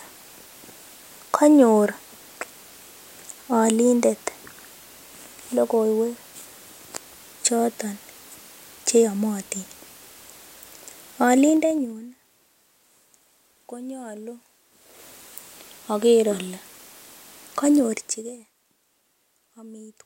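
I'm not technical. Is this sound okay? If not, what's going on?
No, not quite. From 11.46 to 12.0 s and again from 17.76 to 18.5 s, there's zipper noise: the volume drops in small jumps, about fifteen a second, instead of gliding down, and each jump makes a tiny tick, so you hear a brief zipping sound.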